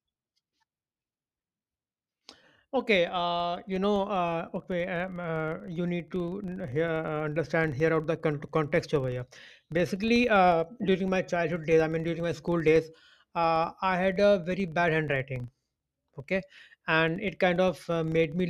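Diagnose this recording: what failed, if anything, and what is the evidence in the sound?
A filter restarted on every block in the processing chain, most plausibly a call-processing or effects stage, runs through the whole recording. The speech carries a steady 25 Hz buzz, consistent with blocks of about 40 ms, and it grows and fades with the speech level. Each block begins from zeroed filter state, so a small transient marks every boundary. A spectrogram shows faint vertical lines every 40 ms; the waveform shows small steps at each block start.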